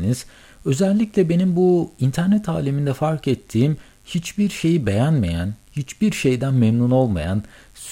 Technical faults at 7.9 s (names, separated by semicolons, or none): mains buzz; clock slip clicks